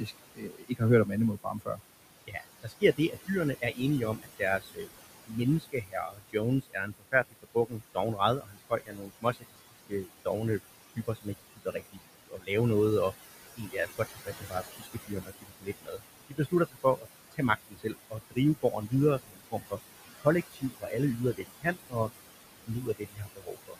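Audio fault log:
Throughout: noise suppressor artifacts. The room noise, about 11 dB under the speech, gets pulled down about 19 dB frame by frame, so the leftover noise sinks between the words and rises under them.
0.00–1.81, 2.26–4.90, 5.25–10.28, 10.96–12.50 (ending just before "noget og"), 13.54–19.78 (right after "noget og"), 20.21–22.10, 22.67–23.78 s: speech cut by the noise suppressor. It mistakes quieter bits of speech for noise and ducks them by about 21–22 dB, so endings and soft consonants get swallowed. That adds up to roughly 0.7 to 2 seconds per stretch, and about three seconds in the longest one.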